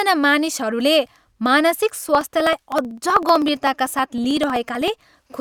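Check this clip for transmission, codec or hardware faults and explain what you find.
One hardware fault is present. From 1.90 to 5.32 s, periodic USB or driver dropouts skip under a millisecond every 63.5 ms. This produces steady ticks during the speech.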